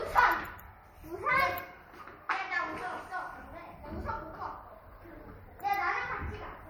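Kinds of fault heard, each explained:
Low-bitrate audio saved at a high bitrate: The sounds keep MP3 artefacts that fit a 64 kbit/s first pass, likely re-saved at a much higher bitrate. Nothing remains above 20.1 kHz.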